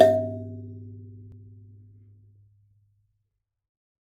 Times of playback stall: none

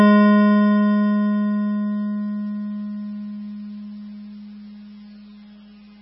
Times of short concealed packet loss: none

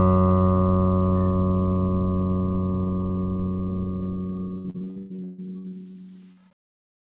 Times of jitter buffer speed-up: none

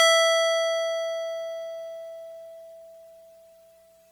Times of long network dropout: none

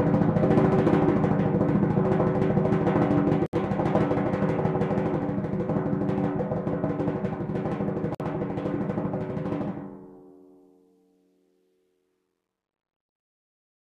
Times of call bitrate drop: none

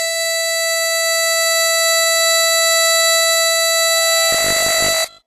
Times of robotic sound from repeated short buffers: 4.32-5.26

